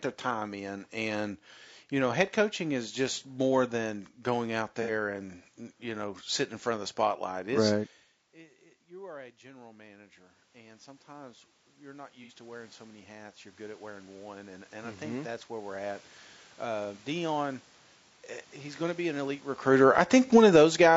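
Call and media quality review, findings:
Low-delay AAC compression throughout. Rough, grainy speech with noise filling gaps between harmonics and a thin, synthetic top band. Likely AAC-ELD at a low rate, around 32 kbps. Spectrogram: smeared harmonic lines, noisy inter-harmonic floor, blocky upper band.

AAC frame loss with concealment at 4.82–4.91 s, 12.23–12.32 s and 20.27–20.31 s. Brief smeared, phasey, noisy patches where the decoder repeats the last good spectrum. The first two fit two lost 30 ms frames and the last fits one. Spectrogram: short vertical smudges breaking harmonic continuity.

Automatic gain rising, 9.05–17.07 s. Input dropped by about 22 dB, and AGC slowly raised gain by about 17 dB, so speech and room noise swell together over several seconds. Waveform: envelope gradually widening. Spectrogram: background floor brightening along with the speech.

Automatic gain falling, 19.64–20.86 s. 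Loud onset, then speech and background sink together as AGC cuts gain by about 12 dB over roughly a second, with the last dropout inside this span. Waveform: tall envelope tapering steadily. Spectrogram: whole frame, noise floor included, dimming.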